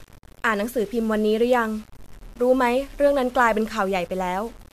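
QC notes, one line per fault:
Throughout: low bit depth without dither. The speech carries a grainy, rasping distortion that tracks the level of the voice, harshest on quiet syllables and decays, which fall into sputtering or drop out where the signal sits between adjacent steps. The likely cause is requantisation to about 7 bits by plain rounding with no dither. The error follows the waveform instead of forming a steady hiss, sitting roughly 30 dB below the signal.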